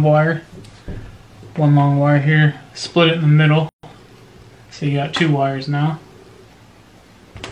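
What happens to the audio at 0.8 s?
Nothing goes wrong at 0.8 s; the audio plays through that moment cleanly, with no dropout, click, distortion or other fault.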